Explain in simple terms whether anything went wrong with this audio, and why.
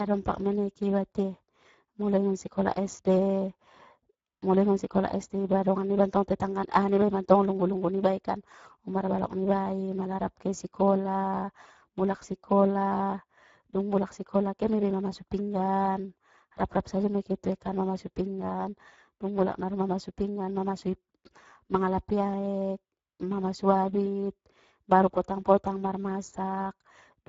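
Something did go wrong, and it lasts the whole clip: the speech has been through the Speex codec, an older voice-chat compressor, at a fairly low quality setting. It rebuilds the voice from a rough model with few details to work with, so the damage is plainly audible: the speech sounds hoarse and grainy. There's also nothing above about 7.6 kHz, so it lacks airy crispness.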